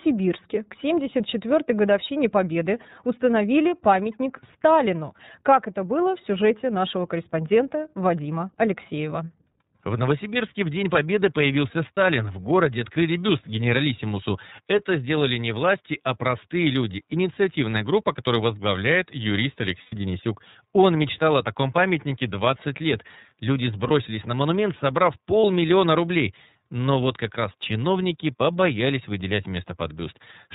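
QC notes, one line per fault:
Throughout: iLBC codec. The whole clip has that narrowband VoIP sound, with nothing above 4 kHz, so the speech loses its air and sibilant detail. The codec damage is plainly audible as a rough, slightly synthetic edge, because each frame's excitation is rebuilt from a compact description rather than the real waveform. The grain and band limit fit iLBC's 13.33 kbps mode with 30 ms frames.
11.95, 19.83–19.95, 23.88–23.91, 25.41–25.45: lost iLBC frames. Each dropout gets patched by the decoder repeating the last pitch cycle with some noise mixed in, so you hear a brief held, buzzy vowel instead of the real sound. Three are single 30 ms frames. The one at 19.83 runs about 90 ms, which points to three frames lost in a row, and that one is long enough to fade. The 23.88 gap sits just before "на монумент собрав", and the 25.41 gap comes right after it. Since iLBC frames stand alone, the voice snaps back almost immediately after each gap.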